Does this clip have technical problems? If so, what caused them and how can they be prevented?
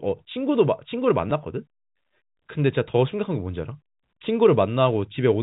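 Yes. At about 1.30 s the speech has a brief packet loss with the last packet repeated: roughly 10 ms of audio went missing, which fits a single lost 10 ms packet, and the receiver filled the hole by replaying the previous stretch. Unlike a dropout, there's no gap of silence, just a small blip over the narrowband telephone sound of G.711. A jitter buffer with proper packet-loss concealment and a network path with less loss would prevent it.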